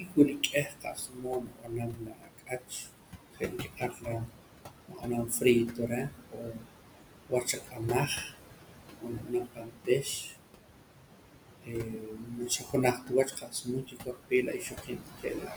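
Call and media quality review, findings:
Noise suppressor artifacts, throughout: per-band gain cuts steady room noise by about 21 dB (noise sits about 7 dB under speech), so the residue pumps between phrases.

Speech cut by the noise suppressor at 0.0–2.9, 3.3–4.4, 4.9–5.4, 5.7–6.7, 7.3–8.4, 9.0–10.4, 11.5–12.8 and 12.9–15.6 s: the suppressor misclassifies speech as noise and pulls it down by about 19–22 dB, so consonants and endings sound swallowed.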